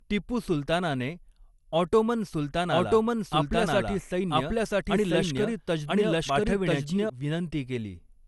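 From start to finish the speech sounds swirly, smeared and hollow, and attacks blur. Nothing is left above 11.9 kHz. This is generation loss, likely from about three passes through a lossy codec. The sound fits MP2 at 96 kbit/s, with fresh quantisation noise added each time.

At 2.72 s a doubled audio track cuts in abruptly. A full-band copy of the speech trails about a second behind, at roughly the same level. It has no decay or room colour. It likely comes from a second, slower capture path. It stops abruptly at 7.1 s.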